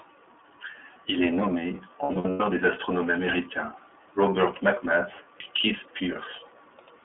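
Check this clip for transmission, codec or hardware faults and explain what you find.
Two faults are audible: iLBC codec coloration across the whole clip, and a burst of lost iLBC frames just after 2 s.

The iLBC codec affects the entire clip. The speech is band-limited to a telephone line, roughly 300 Hz to 3.4 kHz, and has a plainly audible rough, slightly synthetic quality. Each frame's excitation is coded on its own at a low rate, which fits the 13.33 kbps mode with 30 ms frames. On a spectrogram, energy stops sharply near 3.4 kHz and thins below 300 Hz, and harmonics look grainy rather than smooth.

Lost iLBC frames occur from 2.03 s to 2.41 s. About 240 ms of audio is missing, scattered over 360 ms, with the longest continuous gap around a tenth of a second. To fill each gap, the decoder repeats the last pitch cycle mixed with noise, fading it over longer gaps. This is heard as brief held, buzzy, breathy vowel sounds, with clean speech returning almost immediately. 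The waveform shows repeating cycles with added noise, and the spectrogram shows frozen, flat harmonic stripes dissolving into noise.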